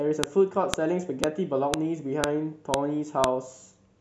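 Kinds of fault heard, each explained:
File header played as audio: clicks at 0.24, 0.74, 1.24, 1.74, 2.24, 2.74 and 3.24 s, where each 0.5 s piece's unstripped WAV header plays as samples.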